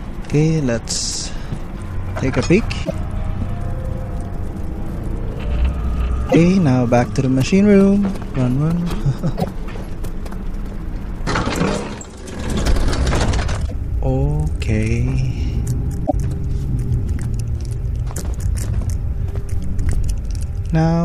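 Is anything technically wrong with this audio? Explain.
Yes. Five brief glitches of about a tenth of a second, at 2.81, 6.26, 9.34, 13.65 and 16.03 s, come from damaged data in a compressed stream that the decoder misreads before resyncing.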